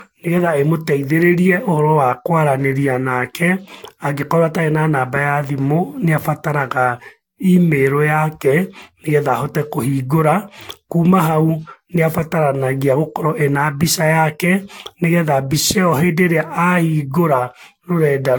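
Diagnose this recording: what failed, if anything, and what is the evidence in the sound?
The speech sounds swirly and hollow throughout, with consonant attacks smeared and nothing above 19.2 kHz. The likely cause is generation loss at the codec stage: around seven Vorbis encodes near 72 kbit/s, each requantising on a shifted frame grid and compounding the damage.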